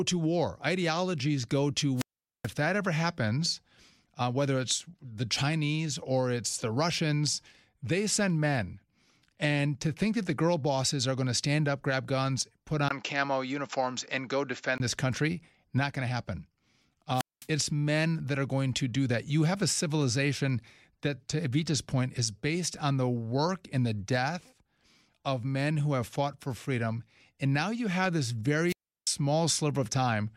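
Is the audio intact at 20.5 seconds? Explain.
Yes, at 20.5 seconds the audio is intact, with no fault audible at that moment.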